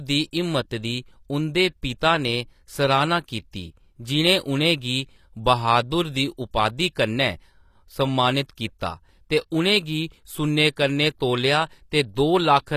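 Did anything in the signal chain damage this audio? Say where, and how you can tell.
Yes: throughout the speech, s sounds turn gritty and lispy, with nothing above 14.9 kHz, likely HE-AAC coding, rebuilding treble from copied lower bands at a bitrate near 24 kbps.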